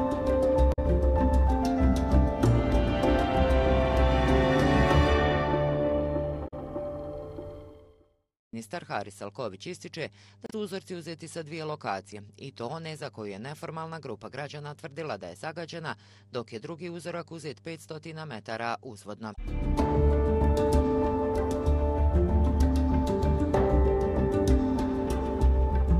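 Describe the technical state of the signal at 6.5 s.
Damaged data in a compressed stream from 6.44 to 6.54 s corrupts frames, so the decoder misreads them and loses sync, producing a brief garbled chirp or blip.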